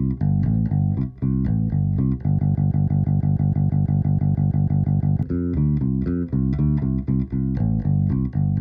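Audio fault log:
2.39–5.23 s, broken-record loop: a 0.16 s fragment of the sound repeats 17 times back to back, each copy identical, so the passage turns into a rigid mechanical cycle for nearly three seconds. The likely cause is a stalled player, encoder or stream resending its last held fragment, so the material that belonged there never plays. Unlike an echo, the repeats don't decay. Unlike a dropout or stutter, there is no silence between copies.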